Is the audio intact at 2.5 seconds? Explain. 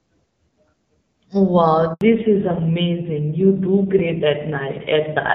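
No. At 2.5 seconds the speech sounds dull and rough, with nothing above 4 kHz. This is a fallback to narrowband starting at 2.01 s and lasting to the end: the call leaves HD Voice for an older, low-rate narrowband codec, discarding the upper band.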